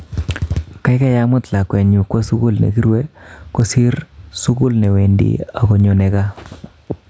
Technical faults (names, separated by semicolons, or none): gain pumping